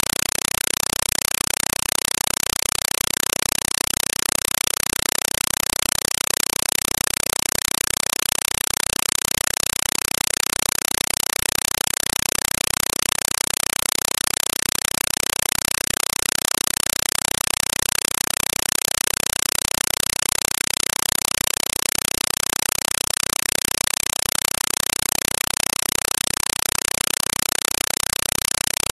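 From the start to the end of the clip, the speech is replaced by a compressed stream played as audio. An AC-3 (Dolby Digital) bitstream has reached the output as though it were ordinary samples, with nothing decoding it, so each coded frame comes out as a burst of noise about 4 ms long, followed by silence from the padding. The bursts repeat 31.25 times a second, which is heard as very loud, harsh chattering static. The density fits a 192 kbps stream. On a waveform this shows as evenly spaced loud blocks separated by flat gaps. A spectrogram shows broadband vertical stripes at that steady rate, with no speech harmonics anywhere.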